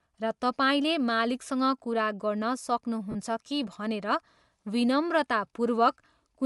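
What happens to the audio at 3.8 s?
At 3.8 s the speech carries Bluetooth LC3 compression, which runs through the whole clip rather than starting there. The codec is likely LC3, the transform codec of Bluetooth LE Audio, which codes the signal in short blocks; the artefacts fit 10 ms frames at around 48 kbps. With too few bits for the top of the spectrum, the codec discards much of it and substitutes noise. The result is a plainly audible breathy, grainy edge on the voice.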